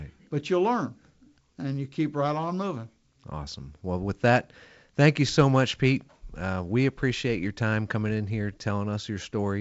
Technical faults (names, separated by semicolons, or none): none